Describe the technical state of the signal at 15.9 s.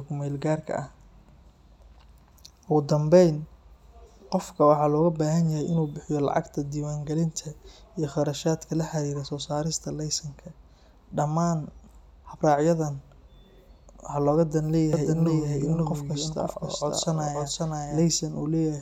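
At 15.9 s the speech is affected by a doubled audio track, running from 14.93 to 18.03 s. A second full-band copy of the same speech trails the original by about half a second. It sits roughly 5 dB below it. The copy has no decay or room colour, and it starts and stops abruptly at the span's edges. The likely cause is a second, slower capture path mixing the signal in again.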